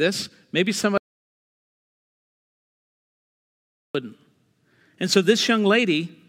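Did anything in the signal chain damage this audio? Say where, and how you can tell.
Yes. An audio dropout to silence spans 0.98 to 3.95 s. Speech cuts to silence, without room tone; likely a lost input connection.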